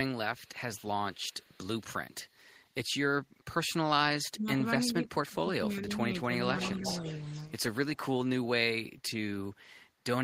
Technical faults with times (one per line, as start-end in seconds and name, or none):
0.37-0.49 echo leak
0.75-0.87 echo leak
1.13-1.81 echo leak
2.13-2.37 echo leak
4.33-6.43 speech suppressed in double talk
6.57-7.60 echo leak
6.79-6.85 speech suppressed in double talk